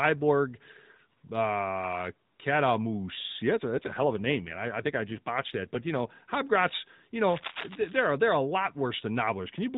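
Speech carried over an AMR narrowband mobile codec at 12.2 kbps, so nothing above 4 kHz reaches the listener. From 3.56 to 6.09 s an AMR rate drop takes the codec down to 5.9 kbps, and the voice turns buzzier and more synthetic. The bandwidth stays the same and there is no gap, which rules out a band switch or packet loss. From 7.30 to 7.96 s, just before "they're a lot", cable scratch noise lays dense, uneven rustling over the speech, about 10 dB below it. This is likely from a worn cable or connector being moved, and it sounds like scratchy rustling rather than the separate clicks of crackle.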